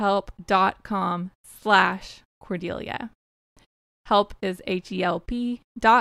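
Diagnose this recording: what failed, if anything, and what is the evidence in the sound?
Nothing in this recording points to a failure at any stage of the chain. No event in the speech would implicate capture, conversion, transmission, storage or playback.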